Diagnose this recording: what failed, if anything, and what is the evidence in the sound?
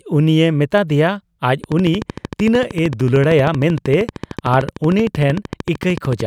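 A train of clicks runs from 1.64 s to 6.21 s: about seventy similar ticks at a steady 13.1 per second, peaking around 5 dB above the speech and audible in pauses too. Their even spacing and uniform shape, unlike random crackle, point to likely interference in the analogue wiring.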